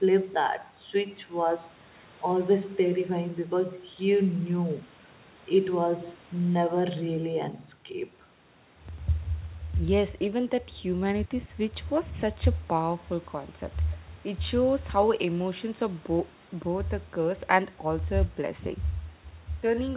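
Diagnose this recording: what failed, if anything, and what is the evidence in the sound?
Nothing failed in this recording.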